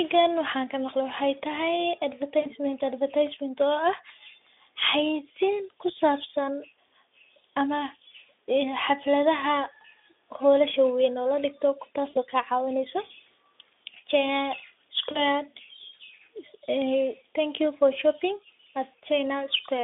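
At 2.42 to 2.48 s, 12.09 to 12.18 s and 15.12 to 15.20 s there's VoIP packet loss concealed by the speech codec. About 40, 60 and 40 ms go missing, which fits a few 20 ms frames. The Speex decoder stretches its last pitch and filter into a buzzy tone or a coloured noise that fades, and the speech stays weak briefly afterwards.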